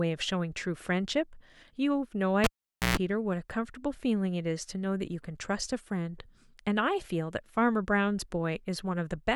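Speech, with a cable pulled and plugged in between 2.44 and 2.97 s. A live lead comes out of its socket and goes back in. First there is a sharp pop. The signal then drops to near silence for about 0.48 s. As the plug is pushed back, only its tip touches at first. That picks up a 60 Hz mains buzz lasting about 0.13 s. A second pop follows as the full connection returns and the speech comes back.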